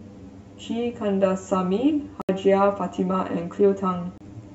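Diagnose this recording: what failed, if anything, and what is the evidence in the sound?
Channel delay (comb filtering) at the buffer or mixdown stage makes the speech sound hollow and phasey throughout. One channel trails the other by roughly 10 ms. Summed to mono, they cancel near 50 Hz and every 100 Hz above, which shows on a spectrogram as evenly spaced dark horizontal stripes.

Dropouts in the playback link cut the audio to silence from 2.22 to 2.29 s (73 ms) and from 4.18 to 4.21 s (29 ms), with a likely cause of Bluetooth packets arriving too late. The waveform shows flat gaps, and the spectrogram shows blank vertical bands. Sound resumes further along, as if it kept playing.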